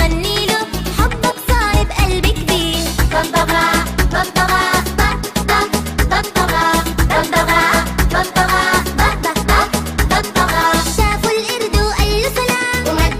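No technical faults can be heard anywhere in it.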